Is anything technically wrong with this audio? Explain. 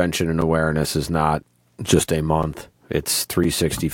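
Yes, there's a gap between chunks: roughly 7 ms holes at 0.42 s (before "is not just a"), 2.43 s (after "is not just a") and 3.44 s. Audio delivered in 1-second chunks gets silence inserted at the joins.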